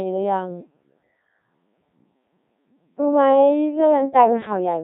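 Right from the start and all the way through, the speech has gone through a Codec 2 vocoder, and the damage is heavy. Nothing of the original waveform survives. The decoder rebuilds the voice from sine waves using just pitch, voicing, energy and a rough spectral outline, so it comes out robotic and buzzy. This fits a very low rate of about 1.3 kbit/s.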